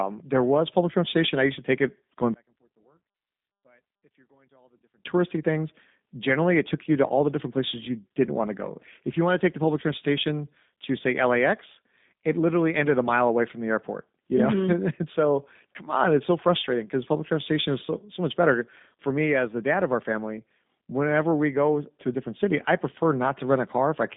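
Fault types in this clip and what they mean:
G.729 codec: The speech was carried by a low-rate speech codec, which fits G.729 at 8 kbit/s. Instead of sending the waveform, it rebuilds each 10 ms frame from a vocal-tract filter, a pitch predictor and a few pulses. Nothing above about 3.8 kHz survives, leaving a telephone band of roughly 150 Hz to 3.7 kHz. The speech stays intelligible but sounds plainly rough, buzzy and synthetic throughout.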